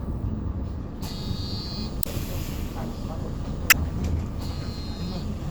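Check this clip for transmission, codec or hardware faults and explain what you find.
Two faults are present. Overlap-add ripple runs through the whole clip. The frames were recombined with an overlap that does not sum to constant gain, so the level swings by about 6 dB at around 200 Hz, heard as a metallic buzz with extra tones around each note.

Damaged data in the compressed stream appears twice, at 2.00–2.07 s and 3.67–3.74 s. The decoder misreads corrupted frames and resynchronises, producing a brief glitch each time.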